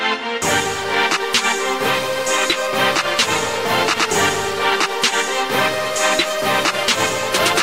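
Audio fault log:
No audible faults found.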